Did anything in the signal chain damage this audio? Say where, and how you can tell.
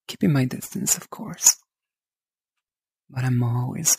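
Yes. A crude rate conversion ran through the whole clip, likely 32 kHz to 44.1 kHz by repeating the nearest sample without filtering. The resulting periodic error, only about 10 dB below the signal, adds an inharmonic, gritty fizz that tracks the louder, brighter sound.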